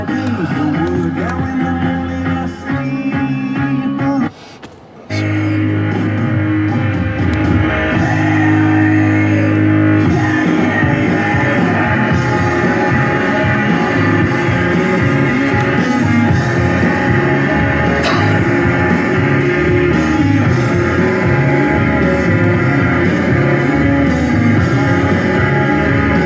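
No technical fault can be heard anywhere in the audio. Nothing in the recording or its playback calls for a time or a cause.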